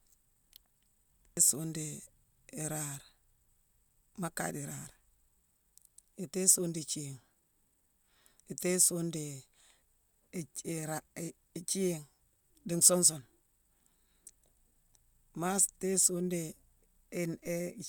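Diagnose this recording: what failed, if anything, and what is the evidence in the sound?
A DC step at the converter: the waveform's zero line jumps at 17.46 s by about -48 dBFS and holds there until the audio ends at 17.89 s. The sudden offset shift registers as a brief low thump, while the speech carries on unchanged over the displaced baseline.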